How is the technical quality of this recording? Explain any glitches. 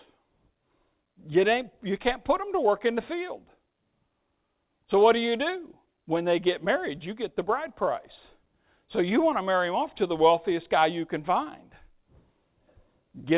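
No glitches turn up anywhere in the recording; the speech comes through a call path whose band stops at 4 kHz, which fits a G.711 mu-law codec at 64 kbps working as intended.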